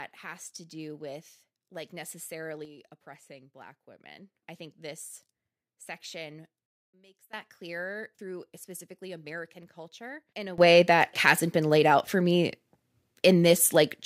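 A digital gain setting likely changed in a single sample with no ramp, producing three sudden gain jumps in this speech. At 2.65 s the level drops by about 6 dB until 4.35 s; at 6.66 s it falls by about 21 dB until 7.33 s; at 10.58 s it leaps up by about 18 dB and stays there to the end. Each time the speech and background noise step together, instantly.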